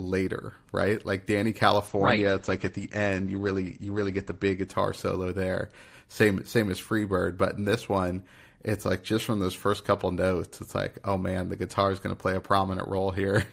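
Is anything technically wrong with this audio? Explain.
Yes. From 1.88 to 4.73 s, a call bitrate drop starves the encoder, consistent with a fall from 48 to 12 kbps. Content above 8 kHz vanishes, and the speech turns muffled and rough for 2.57 s before recovering.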